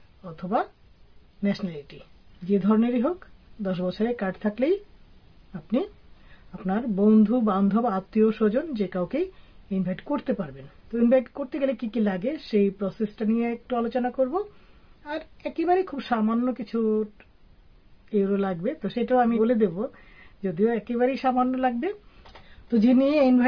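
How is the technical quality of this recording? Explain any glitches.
No glitches or technical faults can be heard here.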